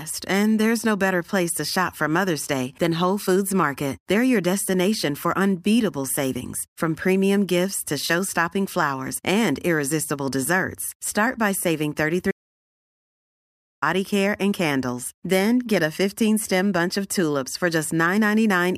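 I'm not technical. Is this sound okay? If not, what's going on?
No. There is an audio dropout to silence from 12.31 to 13.82 seconds, right after "by saving" and just before "care and candles". For about one and a half seconds the sound stops completely, without even the faint background hiss of the room, and then comes back mid-flow. The recording likely lost its input briefly, through a loose connection or a momentary mute, and kept recording pure silence, so anything said in that gap is lost.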